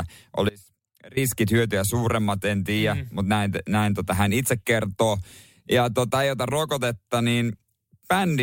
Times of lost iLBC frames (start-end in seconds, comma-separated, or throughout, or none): none